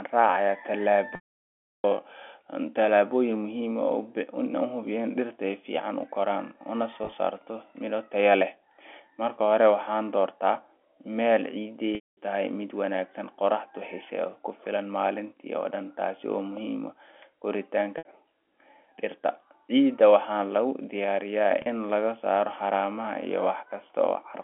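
Packet loss with pitch repetition at 1.15–1.84 s (690 ms), 7.04–7.12 s (scattered, before "saarto miro tayo leh"), 11.95–12.17 s, 17.98–18.05 s and 21.62–21.66 s. Lost packets are bridged by repeating one pitch period, which sounds buzzy and held. The long gaps fade to silence. On a waveform, identical repeating cycles decay; the spectrogram shows frozen harmonics, then a blank band.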